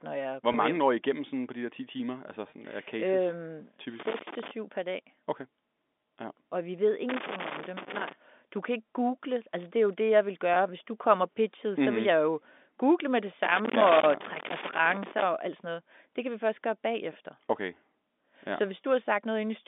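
Speech heard over a G.711 telephone line, its band running from about 250 Hz to 3.6 kHz. At 0.52 to 0.54 s there is packet loss with pitch repetition. About 20 ms of audio goes missing, which fits a single lost packet. The receiver fills the hole by repeating the last pitch cycle. The gap is short, so it comes across as a brief held, buzzy tone. The same fault returns at 2.50 to 2.52 s.

From 4.00 to 4.51 s comes loose connector crackle. A contact in the signal path is making and breaking as it shifts. Each break chops the signal. Any DC on the line turns those breaks into pops. The result is an irregular burst of scratchy crackle over the sound. It comes back from 7.09 to 8.13 s.

Packet loss with pitch repetition hits again at 10.54 to 10.56 s. Once more about 20 ms is lost and bridged by the repeated cycle. It is heard as another short buzzy hold.

The longest stretch of loose connector crackle runs from 13.44 to 15.23 s. 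For almost two seconds the intermittent contact keeps cutting in and out. The sound is ragged and crackly throughout.

At 18.82 s there is one last packet loss with pitch repetition. About 20 ms is patched with a repeated pitch period. It makes a brief, slightly buzzy stutter.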